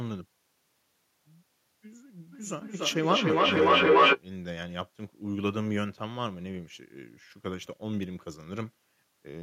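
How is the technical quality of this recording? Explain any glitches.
One glitch stands out. Feedback echo between two devices, from 2.32 to 4.23 s: a second device in the room replays the call and the microphone picks it up again. The sound repeats roughly every 300 ms, building to about 11 dB louder than the speech.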